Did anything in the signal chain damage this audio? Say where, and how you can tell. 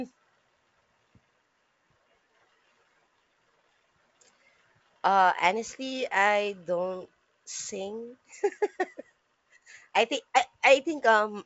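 No, nothing stood out on listening to this speech, which comes through a G.722 wideband telephone path with nothing above 7.7 kHz.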